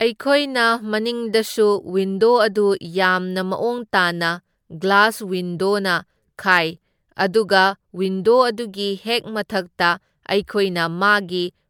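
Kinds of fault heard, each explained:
Generation loss: the speech sounds swirly, hollow and smeared, with consonant attacks softened well beyond what a single 128 kbit/s encode would leave, which fits repeated MP3 decoding and re-encoding, likely around seven passes, each requantising on a shifted frame grid so the damage compounds. On a spectrogram the upper bands look patchy, with flickering holes and smeared time detail, and the content stops entirely near 19.9 kHz. On the waveform, transients look rounded and pre-echoed.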